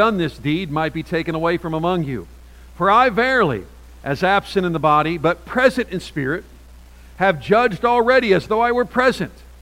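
The sound carries a grainy, gritty distortion from start to finish. It follows the signal. Quiet passages suffer most. They turn rough, and the softest parts sputter or fall away to silence. The error sits roughly 40 dB below the signal. This is low bit depth without dither. The likely cause is rounding to about 9 bits with no dither added. Each sample then snaps to a coarse step, and the rounding error tracks the waveform.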